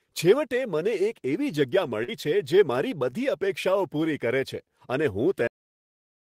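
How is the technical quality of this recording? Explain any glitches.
The recording has two technical faults: a short concealed packet loss early on and a cut-off end.

From 2.03 to 2.10 s, there is a short concealed packet loss. About 40 ms of the speech stream failed to arrive at the decoder in time, and the receiver covered the gap by extending the sound that came just before it, roughly 44 ms of synthesized fill, before crossfading back to the real signal. To the ear this is a brief smear or wobble, and any short consonant in that spot can disappear.

At 5.47 s, right after "પૂરી કરે છે અને", the recording has a cut-off end. The final stretch of audio buffers was never written out, so playback stops partway through the speech rather than finishing it. There is no natural decay or fade: the sound drops straight to digital silence, which continues to the end of the file.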